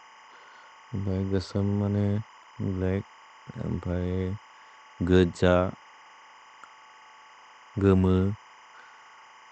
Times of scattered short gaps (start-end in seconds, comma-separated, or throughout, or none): 2.17-2.79